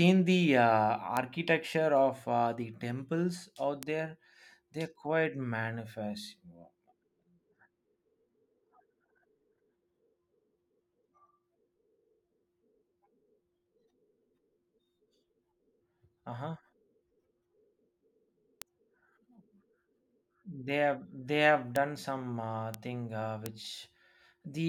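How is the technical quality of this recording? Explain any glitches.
The speech recording has six isolated ticks. Bit error spikes at 1.17, 3.83 (just after "uh the temples out"), 18.62, 21.76, 22.74 and 23.46 s: each is a single sample, peaking at about -11 dBFS, where a flipped bit briefly jumps the value. The result is one sharp broadband tick unrelated to the speech, with no gap or smearing like a dropout click.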